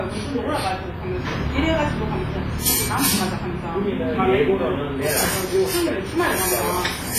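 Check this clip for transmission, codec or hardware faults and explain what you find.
The clip shows one fault, present throughout. Heavy transform-codec damage is most likely WMA compression. Nothing above about 15.2 kHz survives. Quantisation noise smears over tens of milliseconds, giving a ringing, washy tail and hiss that swells with the sound. The damage fits a low bitrate near 24 kbps. The noise pumping with the signal sets it apart from a simple low-pass filter.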